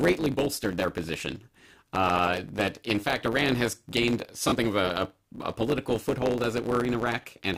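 From start to finish there's a block size mismatch (truncated): one stage writes longer blocks than the next reads, so each block's tail gets chopped. You hear a steady 100 Hz buzz at the block rate, and the speech runs 1.07 times fast with its timbre intact, which fits 512-sample blocks being cut short.

Then come lost LE Audio frames. At 4.48 to 4.52 s, right after "has gained" and before "of a a a", a 40 ms gap gets filled by the LC3 decoder replaying the last spectrum with scrambled signs, so the sound smears into noise. A shorter 20 ms dropout does the same at 7.22 to 7.24 s.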